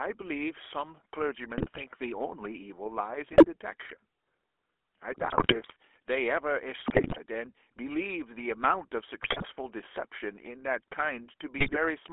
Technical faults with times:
0.00-12.12 GSM full-rate codec
1.58-1.84 GSM bit errors
3.32-3.46 GSM bit errors
5.12-5.76 GSM bit errors
6.86-7.18 GSM bit errors
9.22-9.45 GSM bit errors
11.58-11.77 GSM bit errors

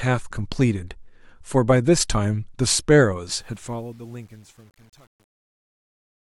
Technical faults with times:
3.31-6.27 truncation distortion on a fade

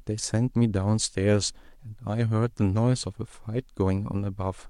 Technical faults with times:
none

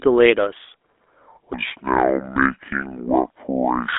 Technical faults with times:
0.00-3.98 GSM full-rate codec
1.53-3.98 section at the wrong speed

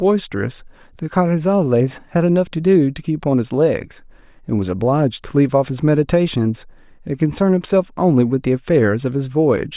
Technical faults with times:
none

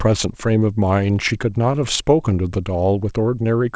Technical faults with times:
1.28-1.99 scattered short gaps

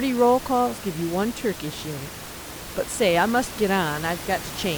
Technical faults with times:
none

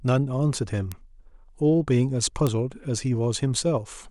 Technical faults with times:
0.92 bit error spike
2.47 bit error spike

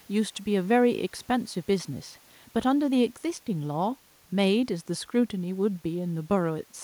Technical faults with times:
none

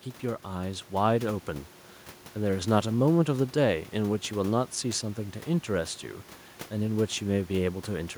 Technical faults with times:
0.21-1.46 automatic gain rising

